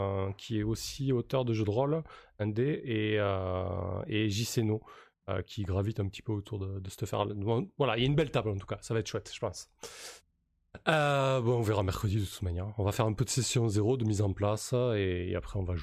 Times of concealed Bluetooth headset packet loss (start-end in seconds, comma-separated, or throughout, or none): none